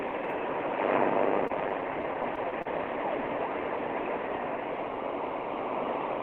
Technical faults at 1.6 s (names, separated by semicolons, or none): repeated stalls (stutter)